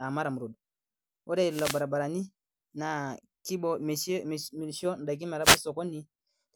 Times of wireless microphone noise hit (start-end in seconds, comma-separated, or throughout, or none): 1.49-1.83, 5.42-5.61